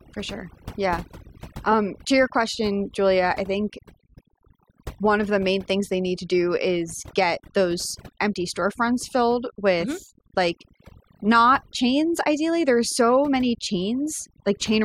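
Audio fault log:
throughout, overdone noise removal: the denoiser is set so aggressively that frequency bands near its noise estimate are pulled down or gated off, taking quiet speech detail with them, leaving near-silent gaps with twinkling specks; a spectrogram shows isolated speckles and ragged, hollowed harmonics.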